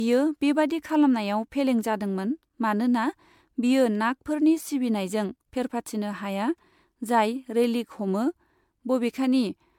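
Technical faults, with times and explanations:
Throughout, generation loss: the speech was likely encoded as MP3 about seven times over, at a rate that fits 128 kbit/s. Each pass requantised on a shifted frame grid, stacking noise and spectral holes, so it sounds swirly, hollow and smeared, with blurred attacks and nothing above 19.9 kHz.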